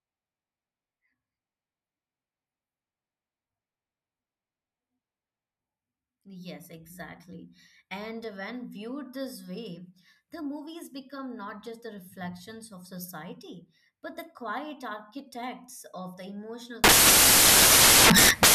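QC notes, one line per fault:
16.84–18.54 s, samples built from the wrong bytes: from 16.84 s to the end of the speech the sound is replaced by loud, harsh broadband noise. The sample bytes are being combined in the wrong order or alignment, so the rapidly fluctuating low bits land in the high-order position.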